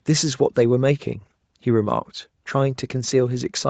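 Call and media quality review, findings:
No faults found in this speech clip. The audio carries nothing above about 8 kHz, consistent with the call microphone processing and a wideband Opus setting on the WebRTC call path.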